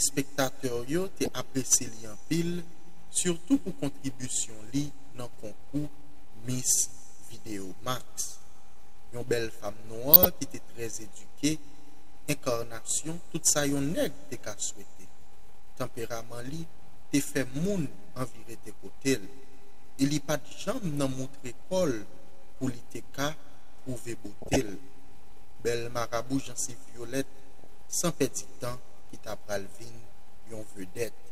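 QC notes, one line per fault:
1.25–1.28 s, DAB burbling: a few brief watery blips as bit errors at a low rate corrupt a few MP2 frames. Wrong samples put short noise blips into single sub-bands.
10.13–10.26 s, DAB burbling: a longer squelchy gurgle that points to about a dozen damaged frames. Wrong samples put noise blips into single sub-bands, unlike broadband clicks.
24.42–24.69 s, DAB burbling: the longest patch of muddy bubbling. Residual bit errors keep putting noise blips into isolated sub-bands, so it sounds like bubbling rather than like silent gaps.
27.64 s, DAB burbling: a very short squelch in which errors slipped past the error correction. Only single sub-bands get noise blips, so it sounds like a chirp and not a click.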